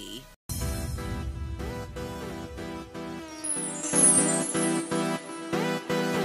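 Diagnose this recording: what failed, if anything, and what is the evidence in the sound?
A digital gain stage, likely in the processing chain after the converter, switched its setting without a ramp. At 3.83 s the sound and its background noise jump together by about 10 dB and stay at that higher level to the end: a sudden gain jump.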